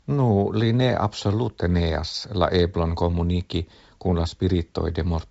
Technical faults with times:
none

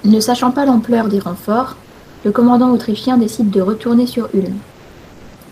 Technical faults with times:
4.71-5.33 comfort noise in place of the background

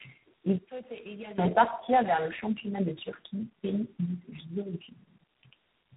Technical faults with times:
0.00-5.97 tandem speech coding

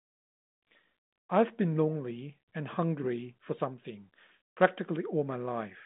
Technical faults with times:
none

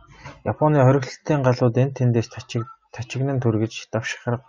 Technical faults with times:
none

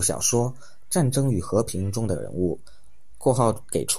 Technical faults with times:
0.00-3.98 DC offset

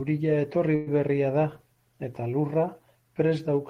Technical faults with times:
0.75-0.89 call audio freeze

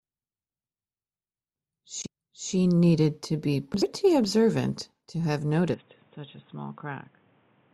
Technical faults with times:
5.74-7.74 input switched to a poorer device

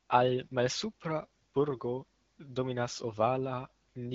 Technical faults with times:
none

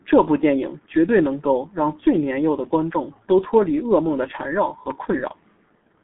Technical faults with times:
0.00-6.04 G.723.1 codec

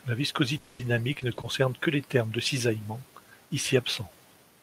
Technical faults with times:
0.57-0.81 long network dropout
0.79-1.45 repeated packet loss (robotic sound)

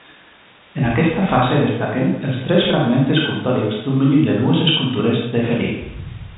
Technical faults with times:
none

